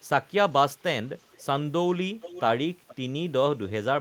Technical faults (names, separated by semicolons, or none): echo leak